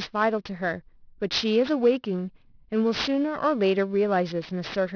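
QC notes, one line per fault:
throughout, aliasing: sibilants in this speech come out gritty and metallic, with stray tones roughly 15 dB below the signal folded back under a hard 5.5 kHz edge, which fits downsampling to 11 kHz without filtering; plain band-limiting would simply lose that content instead.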